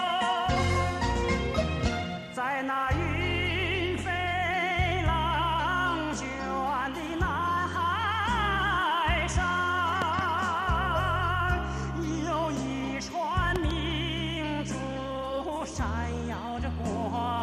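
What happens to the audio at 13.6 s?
A loud pop, two in quick succession, lands between 13.56 and 13.73 s, peaking around 15 dB above the sound. It is likely an electrical pulse from a plug, switch or static. Unlike a dropout click, the sound carries on uninterrupted beneath the thumps.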